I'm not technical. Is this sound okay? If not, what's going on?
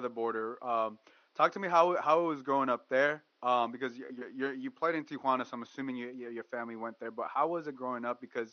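Yes, the recording's signal is technically sound, with only a faint background noise from the room sitting well below the speech.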